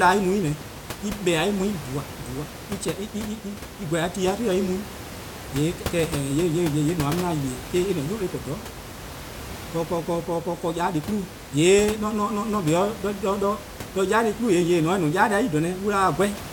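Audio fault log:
No faults detected.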